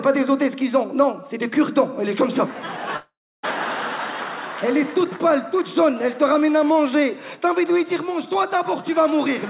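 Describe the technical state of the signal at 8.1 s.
At 8.1 s the signal is intact, with no dropout, click or distortion, only the narrowband sound of the G.711 call path, which leaves nothing above 4 kHz.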